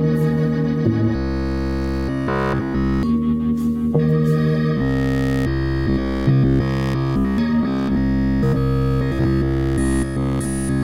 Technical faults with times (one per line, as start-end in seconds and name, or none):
1.16-3.03 robotic sound from repeated short buffers
4.77-7.38 robotic sound from repeated short buffers
7.63-10.83 robotic sound from repeated short buffers